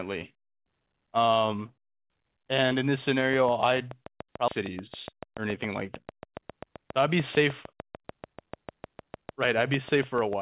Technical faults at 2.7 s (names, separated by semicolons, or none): none